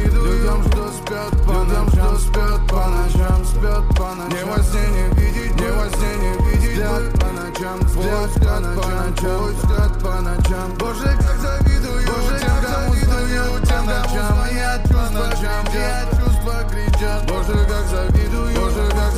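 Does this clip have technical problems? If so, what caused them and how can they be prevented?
Yes: a doubled audio track runs throughout. An equally loud, full-band copy trails about one and a half seconds behind, without the decay or room colour of an echo. It likely comes from a second, slower capture path or two misaligned copies in an edit. Monitor only one input route and check the timeline for duplicated clips before export.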